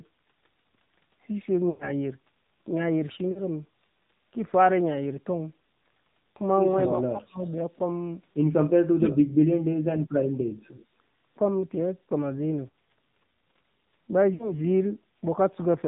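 The whole call passes through the AMR narrowband mobile codec at a low rate of 7.4 kbps, and the damage is plain throughout. The 8 kHz sampling removes everything above 4 kHz, giving the speech a boxed-in telephone tone. At this bitrate the vocal tract model is fed too few pulses to shape the voice cleanly, so it comes out buzzy and plainly synthetic.

At 1.70 s the first lost AMR speech frames appear. Radio errors made frames fail their checksum, and the decoder filled the gap of about 100 ms, which fits a run of five 20 ms frames. It did this by repeating its last good pitch and spectral settings while lowering the gain. The sound stretches and sags toward silence until about 1.92 s, then returns slightly rough. A shorter loss at 3.32 s, about 40 ms, gives only a brief dip and warble.

Between 6.78 and 7.11 s, and again from 7.38 to 7.57 s, a faint delayed copy of the talker trails behind the live speech. 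This is an echo leak, likely from a loudspeaker phone whose echo canceller let some of its microphone pickup through. The copy lags by 121 ms and sits about 20 dB below the speech in the first stretch and about 30 dB below it in the second.

Overlapping that, from 6.98 to 7.39 s, the speech is suppressed in double talk. With both sides talking, the echo canceller likely could not separate its own talker from the echo and pulled everything down. The voice drops by as much as 35 dB or so, in pieces totalling around 300 ms. From 8.73 to 9.34 s it happens again, more deeply. Drops reach about 40 dB and chop out roughly 700 ms, so the talker seems to vanish in fragments.

Lost frames return at 12.70 s, a 40 ms hole heard as a quick warble and dip. Between 14.34 and 14.54 s a loss of about 60 ms gives a short smeared, fading patch before the speech recovers.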